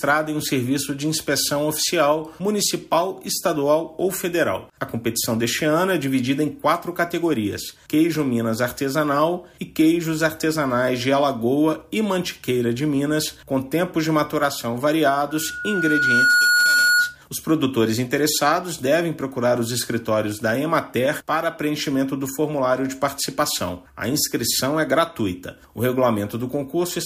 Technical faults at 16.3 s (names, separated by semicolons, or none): loudspeaker feedback squeal